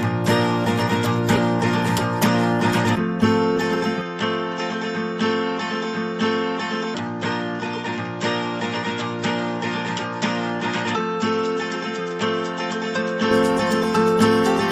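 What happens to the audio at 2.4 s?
Nothing goes wrong at 2.4 s; the audio plays through that moment intact, with no dropout, click or other fault.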